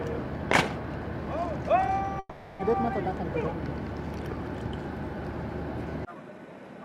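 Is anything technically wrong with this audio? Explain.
Yes. At 2.19 to 2.70 s, a likely long network dropout cut the feed; the last sound stretches into a fading buzz, about 300 ms lost.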